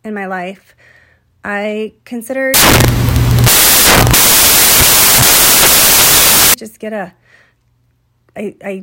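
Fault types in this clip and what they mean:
Samples built from the wrong bytes: from 2.54 s to 6.54 s the speech turns into loud, harsh broadband noise, because each sample's bytes are assembled misaligned or in the wrong order, so the rapidly changing low bits dominate; clean audio returns right before "just get a".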